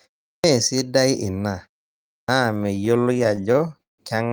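Clipped start after a pause hits this speech recording at 0.30 s and again at 2.15 s. The output device drops into a sleep state during silence (0.3 s before the first onset, 0.55 s before the second) and is slow to wake. About 140 ms and 130 ms of each onset are swallowed, so speech bursts out of silence without its first sounds. Repeated stalls (stutter) follow from 2.57 s to 4.0 s. Packets kept arriving late, and the jitter buffer ran dry 22 times. Each time, the receiver stretched the last sound to cover the gap, fading it across the longer waits, the longest about 157 ms. Roughly 386 ms, about 27% of that stretch, is concealed this way. Nothing is actually lost, but the speech drags and stutters.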